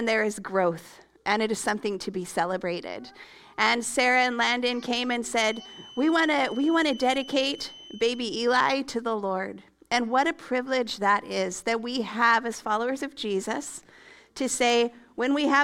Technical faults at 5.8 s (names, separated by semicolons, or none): feedback whistle